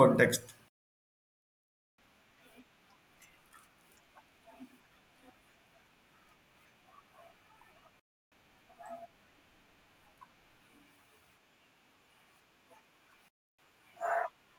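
Three digital wireless dropouts cut into the speech. The first runs from 0.68 to 1.98 s, a full 1.3 s of near silence. Shorter ones follow at 7.99 to 8.32 s and 13.28 to 13.59 s, each about 0.3 s. Each time the receiver lost too much of the radio link's data and simply muted with a very quick fade, so you get a clean hole with no crackle or noise burst on either side.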